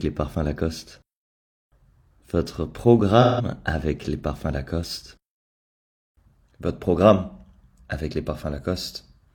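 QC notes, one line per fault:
3.21–3.45 s, AAC frame loss with concealment: a smeared, noisy or phasey patch where the sound loses its detail for a moment. About 170 ms of coded audio went missing, which fits four lost AAC frames. With nothing to decode, the decoder rebuilt the gap from the last good spectrum, reusing its energy with scrambled phase, so the texture persists but the fine structure is blurred.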